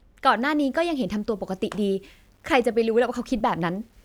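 From 0.34 s to the end, the speech turns grainy, likely from low bit depth without dither, around 10 bits. Unlike steady hiss, the grit rises and falls with the speech.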